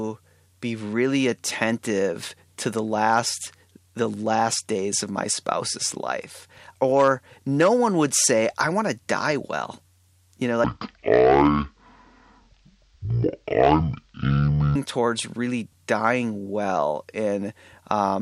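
From 10.64 to 14.76 s the speech drops to half speed and a full octave lower, the sign of stereo read as mono. The player took interleaved left and right samples as one channel in sequence, so each stereo frame became two consecutive samples and time stretched twofold. A simple sample-rate mismatch also slows and deepens audio, but here a fainter mirrored copy of the sound appears in the upper half of the spectrum, from the alternating channels.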